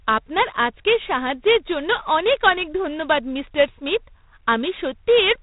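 From start to finish the speech carries G.726 ADPCM damage: a harsh, rasping hiss that swells and fades with the speech level, which fits the 24 kbit/s mode's coarse three-bit prediction errors. Nothing gets through above about 3.8 kHz, so it sounds muffled.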